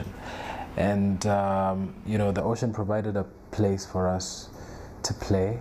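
Channel delay (comb filtering) sets in at 2.40 s and lasts to the end. One channel arrives a fraction of a millisecond late, so the mono sum cancels shared content at evenly spaced frequencies, the first near 3 kHz, leaving the sound hollow.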